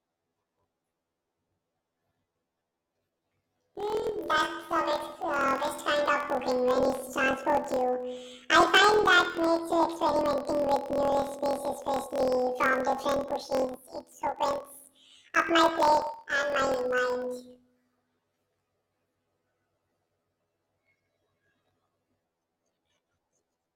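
From start to finish the speech carries a planar audio read as interleaved fault. Each 24 ms block of separate left and right samples is taken as alternating pairs, so every block plays twice at double speed, left then right, raising the pitch an octave while the overall pace holds. The result is a robotic buzz at 41.7 Hz. A spectrogram shows harmonics spaced twice as widely, crossed by regular vertical striations; the waveform repeats in 12 ms halves within each 24 ms block.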